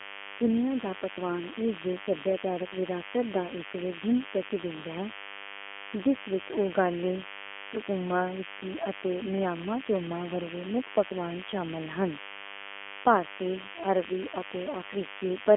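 A speech recording with two problems running the whole way through. First, there's a DECT cordless phone buzz: a thin, steady 100 Hz buzz full of harmonics, sitting roughly 15 dB under the speech. It comes from a nearby handset or base station firing a radio burst every 10 ms, which the audio circuitry rectifies into sound. Second, the G.729 codec damage is plainly audible. The speech has that slightly rough, synthetic edge, with the band squeezed to about 250 Hz to 3.4 kHz and nothing at all above 3.5 kHz. That fits a low-rate 8 kbit/s VoIP codec rebuilding the speech from a simple filter-and-pulse model.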